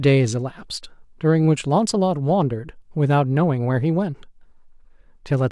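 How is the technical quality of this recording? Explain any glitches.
Nothing in the signal breaks down at any point: the level stays steady, nothing drops out, and nothing is clipped, distorted or interrupted, so there are no glitches to explain.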